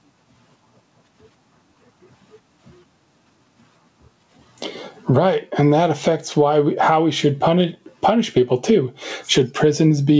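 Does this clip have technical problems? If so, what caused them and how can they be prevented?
Yes. Gain pumping runs throughout, with the gain swinging around 20 dB. On a waveform the noise floor rises between bursts and the peaks look flattened. This is likely from the input gain being set far too high, so a fast limiter clamps down on every loud sound. Lowering the microphone gain so peaks stay well below the limiter threshold would prevent it.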